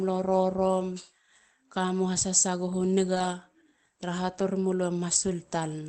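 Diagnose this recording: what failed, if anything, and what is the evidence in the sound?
At the network stage, with recovery in the Opus decoder, a lost packet was rebuilt from error correction between 3.15 and 3.25 s. About 60 ms of speech turns rougher and noisier, which fits roughly three 20 ms packets replaced by their low-bitrate copies. Unlike plain loss concealment, there is no gap, fade or stretched, repeated tone, only a brief drop in coding quality. The call path's roughly 8 kHz band limit stays the same across the stretch.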